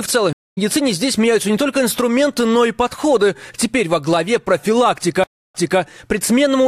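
Right near the start, at about 0.33 s, there's a stream reconnect. The connection drops, the audio goes silent for 242 ms, and then a fresh decoder picks up roughly 150 ms further along, so a slice of sound is simply skipped. It happens again at 5.24 s, with a 299 ms gap, but this time playback resumes 255 ms earlier, so you hear a short stretch repeat as the server resends a burst.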